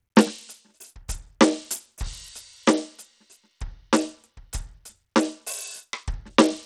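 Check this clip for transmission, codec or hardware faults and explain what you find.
One fault, and it runs through the whole music clip: the treble is thin and unstable, flickering in and out, and a gritty, grainy noise clings to the sound, with metallic aliasing in the upper range. The damage is plainly audible. This is likely Bluetooth SBC compression at a small bit pool, consistent with a rate near 80 kbps: the codec's few wide sub-bands starve the top bands of bits and quantise the rest coarsely, with no hearing model to hide the error.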